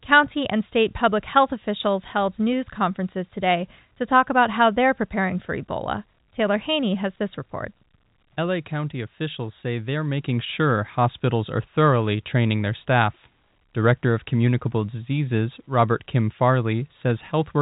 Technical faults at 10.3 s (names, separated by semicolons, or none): none